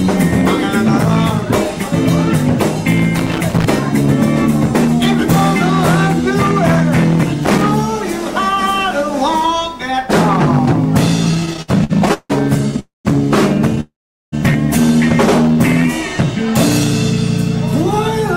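At 3.15 to 3.65 s and again at 7.43 to 7.62 s, bursts of irregular scratching crackle cut through the sound. This is loose connector crackle: a worn or dirty contact kept making and breaking, chopping the signal.

From 11.31 to 12.79 s the audio drags and stutters through about fifteen brief hangs, the longest 160 ms, together adding 400 ms, roughly a quarter of that stretch. These repeated stalls (stutter) came from packets arriving late, so the jitter buffer kept running dry while the receiver stretched out the last sound each time.

Right after, from 12.79 to 13.07 s, comes a call audio freeze: a fading buzz that drops into about 160 ms of silence before the sound resumes where it stopped, 253 ms later than it should. A second, longer freeze at 13.81 to 14.34 s holds for 518 ms, about 410 ms of it silent. Both are likely caused by packets held up in transit, which emptied the jitter buffer, so a gap was inserted but nothing was lost.

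At 15.43 to 15.84 s the sound slows to about 91% speed, with drawn-out sounds at unchanged pitch. This jitter buffer slow-down added 50 ms by repeating single pitch periods to rebuild the buffer's reserve.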